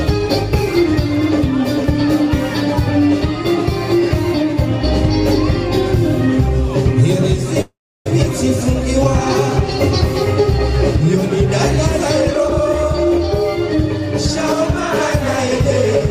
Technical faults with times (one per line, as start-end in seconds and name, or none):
7.61-8.07 call audio freeze
12.19-13.19 jitter buffer speed-up